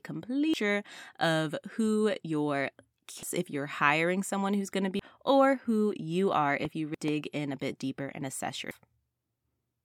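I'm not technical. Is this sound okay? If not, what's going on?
No. There are two kinds of fault in this speech recording.

The first is damaged data in a compressed stream. At 0.54, 3.23, 4.99, 6.95 and 8.71 seconds, a small piece of the stored file is corrupted. The playback software can't read those bits, loses its place for an instant, and skips ahead to the next readable chunk. Each one comes out as a brief chirp or blip, often with a jump forward in the speech.

The second is a loud pop, heard twice: from 6.65 to 6.67 seconds and from 7.08 to 7.10 seconds. Each is a single sharp pop sitting on top of the speech, which continues underneath. The first is well above the level of the speech, and the second is somewhat quieter. The likely cause is a sudden electrical jolt, such as a plug, switch, static discharge or driver glitch.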